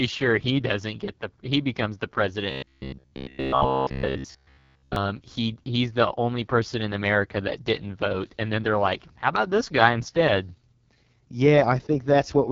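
From start to finish the speech sounds rough and raspy, with a gritty, synthetic edge and nothing above 7 kHz. This is the AMR wideband (HD Voice) codec pushed hard. Below 6.4 kHz it rebuilds the voice from a pulse-driven vocal tract model, and the band above is filled with shaped noise. The heavy damage points to the codec's lowest 6.6 kbit/s mode.

From 2.50 s to 4.96 s the voice turns into a rigid, metallic buzz near 66.7 Hz that still loosely follows the speech. This is robotic sound from repeated short buffers. The likely cause is audio arriving too seldom, so the same short slice, around 15 ms long, is replayed while most of the real signal, roughly two thirds or more, is skipped.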